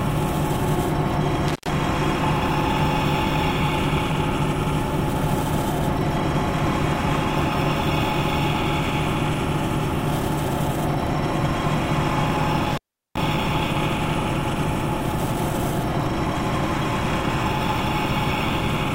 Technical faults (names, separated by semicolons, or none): intermittent contact